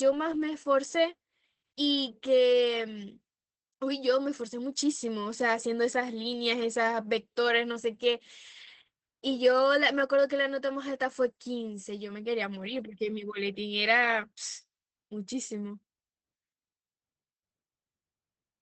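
Throughout the whole clip the speech has been squeezed through Opus voice compression running in its SILK linear-prediction mode at a low rate. The coder has limited the signal to wideband, so nothing survives above about 8.3 kHz, and it has coded the excitation coarsely, with damage that fits a rate around 12 kbps. The speech sounds muffled and dull, with a hoarse, slightly robotic edge that is plainly audible from start to finish.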